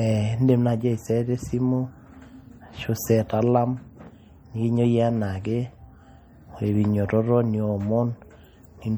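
Throughout the speech, plainly audible damage points most likely to MP3 compression at a low rate around 48 kbps. Weak frequency lines drop in and out between frames, giving a watery, swirly texture and smeared attacks. Unlike plain low-pass filtering, content still reaches 21.4 kHz.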